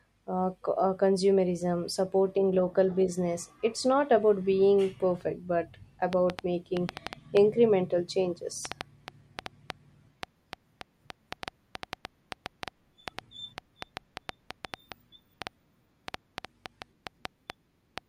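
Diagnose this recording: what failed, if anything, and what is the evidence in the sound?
A train of clicks runs from 6.13 s to 17.99 s, about 4.5 per second at an uneven pace, roughly fifty in all, peaking well above the speech, pauses included. The stage is likely analogue wiring or the interface, picking up intermittent interference. A spectrogram shows thin broadband vertical lines, and the waveform shows sharp, similar spikes.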